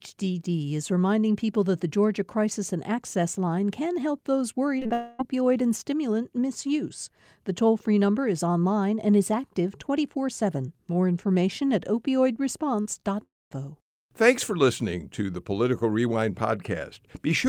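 At 4.79, 4.83 and 4.87 s, three back-to-back bursts of short concealed packet loss, each about 20 ms, replace the speech with extrapolated sound continued from the last sound. They are heard as a quick wobbly smear. On a spectrogram, harmonics flatten and blur briefly.

From 4.93 to 5.21 s comes a long network dropout, likely from audio arriving too late or not at all. The whole 0.28 s is filled by a continuation that buzzes and fades without reaching silence. The waveform shows a decaying, overly regular stretch before real speech resumes.

Around 12.81 to 12.87 s a 40 ms short concealed packet loss occurs, followed by 20 ms losses at 12.93 and 13.01 s. Each is heard as a brief smear where the decoder patched the gap from preceding sound. On a spectrogram they appear as small smoothed, harmonically static patches.

The long network dropout from 13.23 to 13.53 s, likely a stretch of audio never delivered, starts with a brief fading continuation and then leaves about 0.23 s of silence. 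On the waveform this shows as a short decaying tail, then a flat gap before speech returns.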